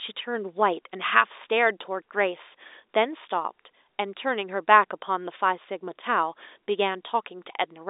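The speech sits in the ordinary telephone band of 300 Hz to 3.7 kHz with nothing above 3.8 kHz, as expected from G.711 telephone coding working normally, and no technical faults can be heard.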